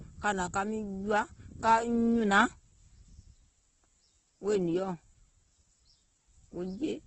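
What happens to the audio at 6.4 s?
At 6.4 s the speech carries the same Opus compression damage heard through the whole clip. Nothing sounds above 8.1 kHz. Bands starved of bits are filled with folded or noisy content, so the sound turns rough and grainy. This likely comes from heavy CELT-mode encoding near 12 kbps.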